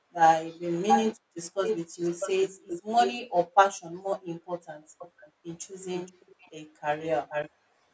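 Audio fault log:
0.88–1.16 s and 1.64–3.18 s, echo leak: a delayed copy of the speech arrives about 634 ms late, briefly louder than the speech itself, then somewhat below it; the far end likely plays the call on a loudspeaker and its echo canceller let part of the pickup return.
4.98–5.31 s, 5.95–6.51 s and 7.0–7.5 s, echo leak: the echo recurs at about 474 ms delay, faint at first and rising to just under the speech level.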